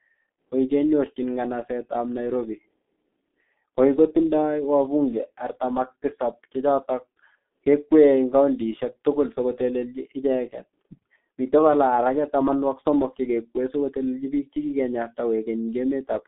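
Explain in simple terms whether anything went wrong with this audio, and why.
The speech passed through a G.723.1 codec for the whole clip. It squeezes audio hard and drops everything above about 3.6 kHz, so it sounds muffled, hoarse and blurry.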